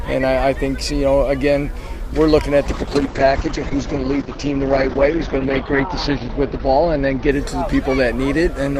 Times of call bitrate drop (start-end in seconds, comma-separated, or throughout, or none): 2.66-8.79